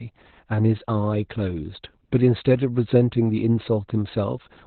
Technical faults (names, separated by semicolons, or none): Opus voice compression